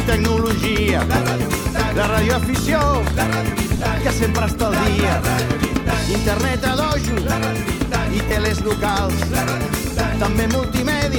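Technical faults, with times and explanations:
3.76–3.86 s, lost LE Audio frames: about 60 ms of the Bluetooth LE Audio stream drops out in short gaps spread over 90 ms, the longest around 20 ms. The LC3 decoder fills each gap by replaying the last spectrum with random signs, so tones smear into a brief noisy hiss.
8.28–8.31 s, lost LE Audio frames: 22.5 ms of lost audio, which fits three 7.5 ms frames, gets the same concealment. It sounds like a quick grainy smudge rather than a clean dropout.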